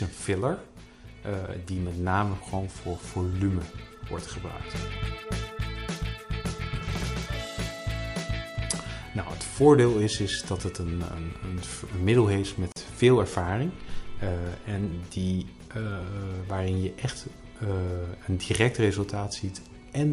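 At 12.72 s the sound drops out for about 41 ms, a short hole with smeared edges, before picking up exactly where it left off. This is a gap at a join of encoded pieces: the audio was encoded in separate sections and joined without trimming, so the encoder's start-up delay and the padding of the previous section's final frame remain as silence at the seam.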